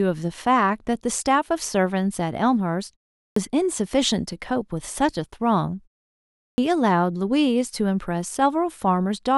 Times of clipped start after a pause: 3.32-3.36, 6.54-6.58

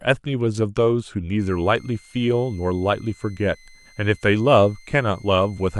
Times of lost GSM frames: none

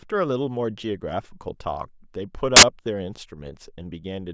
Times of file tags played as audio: 2.56-2.63

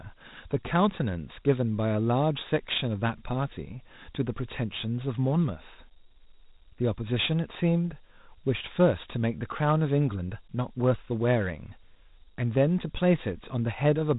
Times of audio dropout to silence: none

